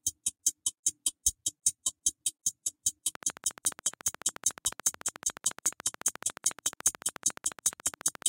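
Something in the chain, likely electrical interference from nearby equipment or a faulty connection or power supply, began injecting a repeated pulse into this sound recording at 3.15 s and kept going until 8.23 s. The result is a train of clicks: roughly seventy near-identical ticks at a steady 14 per second, each peaking about 10 dB above the underlying audio, so the ticking sits clearly on top of the sound and carries through its quieter moments too.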